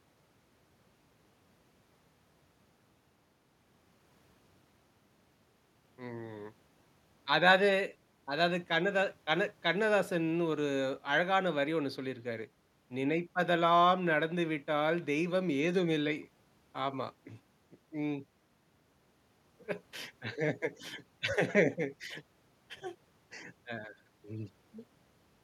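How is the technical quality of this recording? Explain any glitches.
No glitches or technical faults can be heard here.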